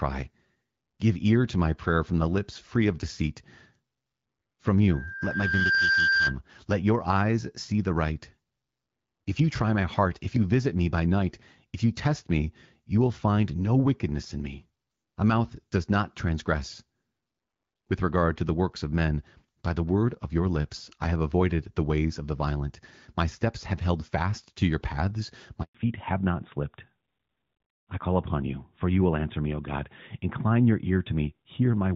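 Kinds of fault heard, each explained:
Loudspeaker feedback squeal: a 1.6 kHz tone swells over roughly a second, peaking about 5 dB above the speech, as the microphone re-amplifies its own loudspeaker.
Handover gap: after "fast to your paths" the sound drops out for 120 ms while the call switches networks and no frames arrive.
Fallback to narrowband: from the gap onward the speech turns duller and rougher, with nothing above 4 kHz, as the call drops from HD Voice to a narrowband codec.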